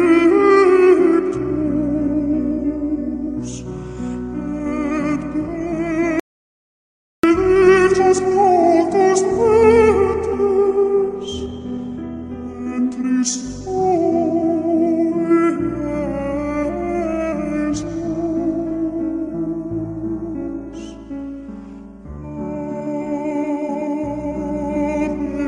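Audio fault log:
6.20–7.24 s, audio dropout to silence: the sound cuts to silence for about 1.04 s, no room tone, likely a lost input while recording continued.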